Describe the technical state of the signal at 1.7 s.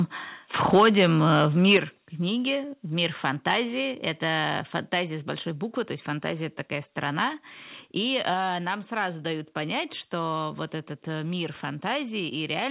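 At 1.7 s the signal is in microphone overload, running from 0.65 to 1.77 s, likely because the input was set about 5 dB too hot, so peaks flatten against the converter's ceiling and the loudest syllables crackle harshly. Right after, at 1.77 s, a microphone volume step-down likely cuts the input gain by 6 dB, and the sound and background abruptly drop in level.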